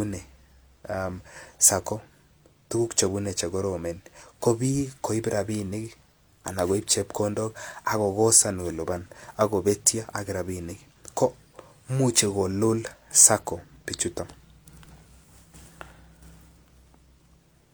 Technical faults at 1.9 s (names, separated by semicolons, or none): none